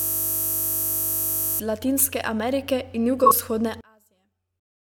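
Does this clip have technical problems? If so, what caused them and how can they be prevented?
Yes. From the very start until 1.6 s there is a system hang loop: the audio was already stuck when the clip begins, with the hardware replaying one 20 ms slice of its ring buffer about 80 times, which fits a 20 ms buffer. The result is a steady 50 Hz buzz. On a waveform this appears as an identical short cycle tiled end to end, and a spectrogram shows rigid harmonic lines at multiples of 50 Hz with no speech movement. To prevent it, use a watchdog that mutes or stops the output stream when the driver stops refilling the buffer.

Between 3.24 and 3.31 s, a corrupt frame was concealed. Damaged AAC data, roughly three frames' worth, was caught by the decoder, which patched over it rather than playing garbage. The concealed stretch lasts roughly 80 ms. It shows as a brief dip in the waveform envelope and a blurred, faded vertical band on the spectrogram. 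To prevent it, carry the stream over a link with error protection or retransmission.

From 3.81 s to the end, the speech drops by about 34 dB to a faint residue. The likely cause is one channel inverted, so that centred content cancels when the channels are summed to mono. The waveform collapses to near-flat, and the spectrogram loses most of its energy. To prevent it, check channel polarity and mono compatibility with a correlation meter before distribution.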